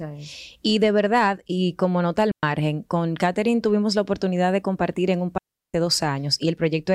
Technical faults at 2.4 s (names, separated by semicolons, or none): digital wireless dropout